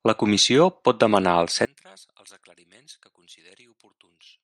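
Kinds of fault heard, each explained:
One channel inverted: from 1.65 s the speech falls about 28 dB to a faint residue, likely reversed polarity cancelling in mono; waveform and spectrogram nearly blank.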